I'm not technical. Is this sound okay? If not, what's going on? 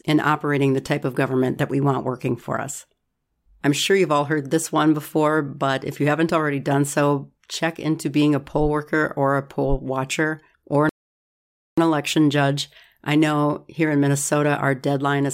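No, there's one hiccup. At 10.89 seconds, right after "poll watcher or an", the speech drops into silence for a bit under a second, then picks up at 11.78 seconds with "election judge I know". That's a rebuffering stall: the player ran out of downloaded audio and had to wait for more. Nothing gets skipped. The speech resumes exactly where it stopped, so the only damage is that awkward pause of about 0.88 seconds.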